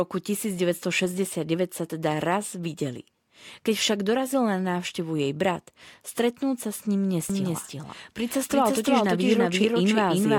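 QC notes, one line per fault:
7.3 s to end: doubled audio track, an echo-free full-band copy trailing about 300 ms behind at roughly equal level and starting abruptly, likely from a second, slower capture path.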